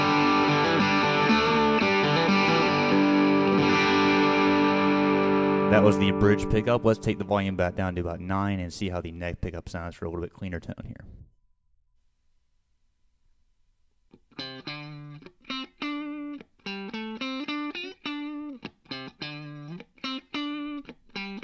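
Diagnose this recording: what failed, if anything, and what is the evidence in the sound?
Nothing failed; no fault is audible anywhere in it.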